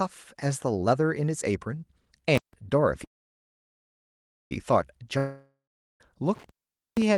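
Intermittent contact at 2.35 s: a loose cable or plug briefly opens the circuit, so the sound cuts out for about 160 ms with crackle at each edge and only faint hiss in between. The same fault returns later for a longer stretch.

Call audio freeze from 3.04 to 4.52 s: packets were likely held up on the way and the jitter buffer ran dry. The last sound trails off briefly, then about 1.44 s is silent. The audio resumes where it stopped, nothing lost, but now about 1.5 s late.

Long network dropout from 5.18 to 6.01 s: audio likely stopped arriving, and about 0.82 s of it never played. A fading tail of the last sound gives way to about 0.4 s of silence, and the audio returns further on with that stretch gone.

Intermittent contact again from 6.35 to 7.02 s: the connection opens for about 476 ms, bracketed by crackle, with faint hiss in place of the sound while the line is open.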